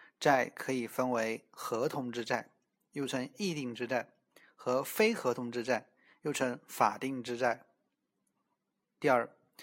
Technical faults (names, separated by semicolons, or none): none